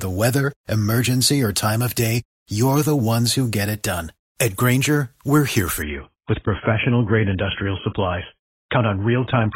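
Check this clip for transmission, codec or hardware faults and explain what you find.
One transmission fault. From 5.82 s to the end, an adaptive stream at a lower bitrate cuts the treble above 3.8 kHz and sounds dull and smeared, which fits a sudden switch from about 96 to 24 kbit/s AAC, with no gap.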